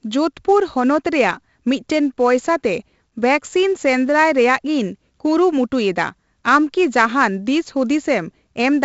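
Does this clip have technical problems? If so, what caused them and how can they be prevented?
Yes. 4-bit ADPCM compression is present throughout the speech. Each sample is coded as a small 4-bit step away from a predicted value, so the coding error becomes a gritty hiss that rises and falls with the level and is heaviest on loud passages. Here the damage is heavy, with harsh distortion on sharp onsets where the adaptive step cannot grow fast enough. Nothing is heard above about 7.7 kHz, which fits a 16 kHz sample rate at roughly 64 kbps and leaves the sound dull. To prevent it, record and deliver speech as uncompressed PCM at a higher sample rate, or use a modern perceptual codec at an adequate bitrate.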